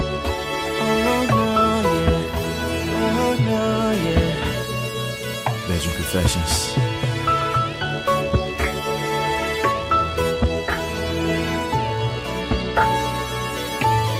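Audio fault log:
throughout, computer activity noise: load changes inside the computer disturb the ground that the audio circuit shares with it, putting a buzzy pulsing at around 70 Hz roughly 30 dB below the sound, driven by the machine's activity rather than the audio.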